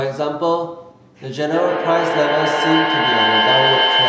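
At 1.52 s a feedback howl takes hold and runs to the end of the clip. Two devices sharing the room on the same call are feeding each other: the loudspeaker's output leaks back into the microphone, and each trip round the loop comes back louder. The repeats pile up roughly every 150 ms and narrow to a piercing tone around 3 kHz, and it peaks at about 3 dB above the speech, sitting well inside the call's band, which stops at 8 kHz.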